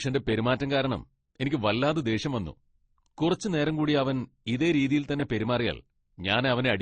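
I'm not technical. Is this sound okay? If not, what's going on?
No. The recording was most likely squeezed by one lossy codec and then squeezed again by a second one, Opus, which is called transcoding between lossy codecs. Each pass throws away detail, and the second pass also wastes effort preserving the first pass's damage. From start to finish, the speech has nothing above 9.6 kHz, so it sounds dull and muffled, with the flaws of both codecs heard together on top.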